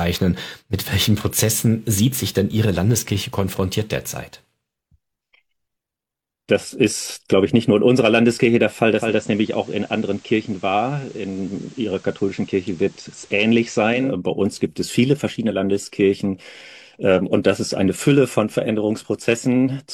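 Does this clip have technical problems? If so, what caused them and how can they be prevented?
Yes. From 8.90 s to 14.16 s the receiver lost its digital signal and performed a digital radio blend to analogue, cross-fading over about 250 ms to the station's FM broadcast and later fading back. In that stretch the level drops by about 2 dB, and a faint hiss sits well below the audio. Better antenna placement or a stronger digital signal would keep the receiver from falling back to FM.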